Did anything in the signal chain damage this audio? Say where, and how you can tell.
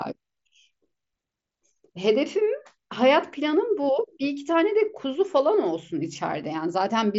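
No, nothing in this speech stood out on listening as damage from any stage of the chain.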